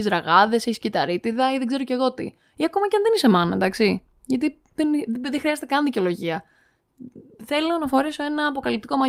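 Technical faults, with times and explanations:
No technical faults can be heard anywhere in the recording, and the signal stays continuous and intact throughout.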